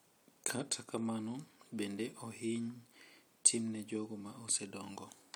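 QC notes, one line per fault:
Nothing stood out on listening to this speech clip.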